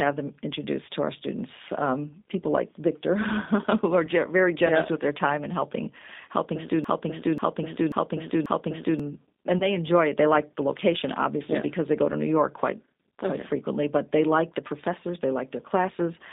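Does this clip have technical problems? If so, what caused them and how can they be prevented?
Yes. The whole clip carries G.729 codec damage, and it is plainly audible. The speech is band-limited to roughly 200 Hz to 3.7 kHz, so it sounds thin and boxed-in. The codec rebuilds each frame from a vocal-tract filter, a pitch predictor and a few pulses. That leaves the voice rough and slightly synthetic, which fits an 8 kbit/s G.729A stream. To prevent this, use a wideband codec such as Opus or G.722 on the call path.

There are two short dropouts from VoIP packet loss concealed by the speech codec. One is at 4.06 to 4.10 s and the other at 9.59 to 9.77 s. Each gap covers about 20 ms of audio, which fits a single lost packet. The decoder fills the gap by extending its last pitch and filter state at falling gain. That gives a brief stretched sound that fades. The second event stays distorted for much longer than the gap, because each new frame builds on the damaged state. 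To prevent this, reduce network loss with QoS or forward error correction, and use a larger jitter buffer.

From 6.84 to 9.00 s there is a broken-record loop. A fragment of about 0.54 s plays four times back to back, and the audio that belonged in that stretch is lost. The likely cause is a stall in the player or stream that kept resending its last buffered fragment. To prevent this, make sure the playback path fills with silence or conceals the gap on underrun instead of replaying stale buffer data.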